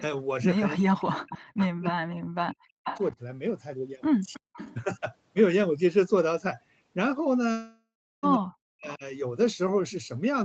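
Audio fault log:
0.76–2.77 s, 3.12 s, 4.40–4.47 s, 8.37–9.03 s: speech suppressed in double talk. The voice dips by up to about 40 dB, or about 10 dB at 3.12 s. The likely cause is the echo canceller ducking during overlapping talk.
1.00–1.67 s, 2.84–3.03 s, 4.33–4.75 s: echo leak. A copy of the voice trails it by 321 ms, about 10 to 15 dB down. It is likely loudspeaker pickup that the far-end canceller missed.
7.51–8.26 s: long network dropout. The last sound drags on as a fading buzz and then drops into near silence. About 0.72 s of audio is gone, likely packets that never arrived.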